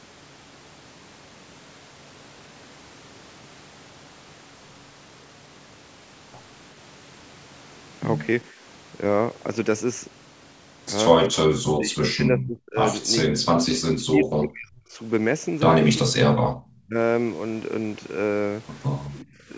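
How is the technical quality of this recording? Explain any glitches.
The second half of the speech has a run of dropouts, all speech suppressed in double talk, at 11.46 to 12.77 s, 13.34 to 14.99 s, 16.0 to 16.29 s, 16.87 to 16.95 s and 19.21 to 19.5 s. The voice ducks hard, as much as about 40 dB in the first three, and more gently, about 25 and 15 dB, in the last two. The likely cause is an echo canceller that heard both ends talking at once and pulled the near talker down with the echo. The call processing band-limits the audio, with nothing above 8 kHz.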